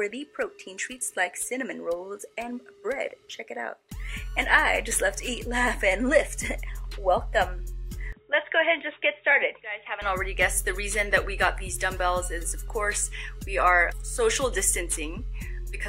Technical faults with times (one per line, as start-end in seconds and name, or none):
8.12-10.02 input switched to a poorer device